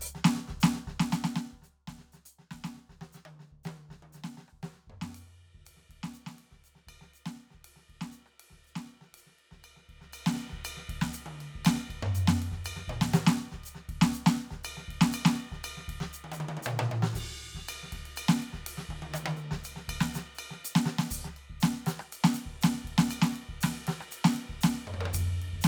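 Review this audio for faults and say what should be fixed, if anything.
Nothing in this music needs fixing. Its level rises and falls smoothly like a fader, as intended.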